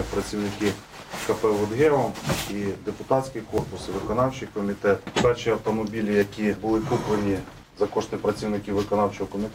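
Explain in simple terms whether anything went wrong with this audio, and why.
At 3.58, 6.22 and 8.3 seconds the sound jumps slightly ahead, losing between one and three hundredths of a second each time. This is likely a dropped buffer (overrun): a chunk was overwritten before it was saved. Unlike a dropout, there's no gap of silence.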